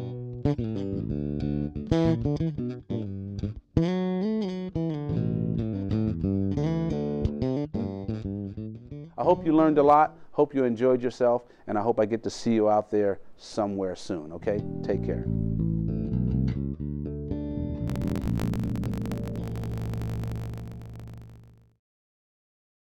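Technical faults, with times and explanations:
17.86 to 22.85 s: block size mismatch (truncated). A 50 Hz buzz appears and the audio runs 1.16 times too fast. The writing stage sends longer blocks than the next stage reads, which fits 1024-sample blocks. The end of each block is discarded, so playback jumps forward at the block rate.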